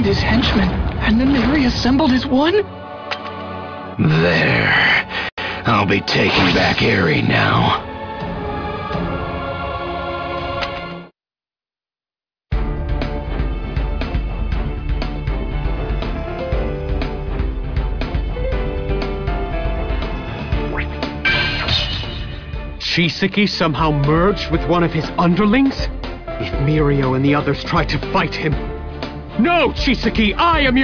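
There are no technical faults to describe at any point in the audio.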